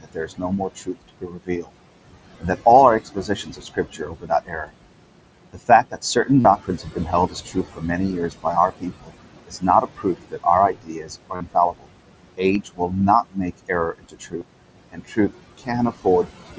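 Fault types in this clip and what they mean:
Noise suppressor artifacts, throughout: a noise suppressor works frame by frame, pulling down every frequency band it judges to be steady noise, here by about 21 dB. The room noise, which sits about 11 dB below the speech, therefore drops away in the gaps between words and comes back up underneath them. The background audibly pumps with the speech instead of staying constant, and the voice can take on a thinner, processed quality.
Speech cut by the noise suppressor, 0.0–1.71 s, 2.4–4.72 s and 5.53 s to the end: the suppressor misjudged parts of the speech as noise and turned them down along with the background. The deepest drops are about 22 dB, 20 dB and 22 dB respectively. Roughly one second, one and a half seconds and three seconds of speech are affected in those stretches, and those parts sound swallowed or faint compared with their surroundings.
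Concealed Bluetooth headset packet loss, at 6.40 s, 11.36 s, 12.54 s and 14.40 s: voice packets travelling between the headset and the phone went missing. The receiver bridged each gap by repeating the best-matching stretch of the most recent audio. The gaps last 45 ms, 45 ms, 7.5 ms and 15 ms. The two 45 ms runs carry a held, buzzy tone with a small warble where real audio resumes, while the single-frame patch at 12.54 s is nearly hidden.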